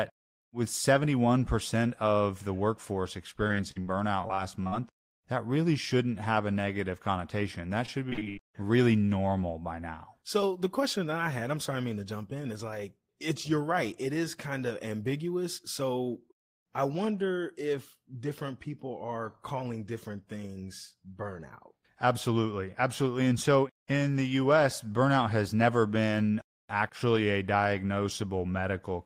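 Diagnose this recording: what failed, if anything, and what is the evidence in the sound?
Network stage: repeated packet loss (robotic sound) from 3.47 to 5.20 s and 7.86 to 8.39 s. Short holes, up to 80 ms, are patched by repeating sound, giving choppy speech with pieces missing.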